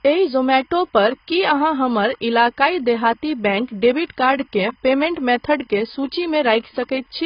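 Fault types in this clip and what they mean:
Timecode bleed: linear timecode leaking in from a nearby track or cable, heard as a faint, steady chirping warble about 40 dB below the speech. It alternates between tones near 1 kHz and 2 kHz at a 25 frames-per-second rhythm, so unlike a hum or whine it never holds a single pitch.
AAC compression: lossy coding that quantises frequency lines against a hearing model, here likely AAC-LC at a low bitrate around 16 kbps. Nothing remains above 5.2 kHz, so the speech sounds dull and smeared, with a fizzy, warbling texture on sibilants rather than a clean low-pass roll-off.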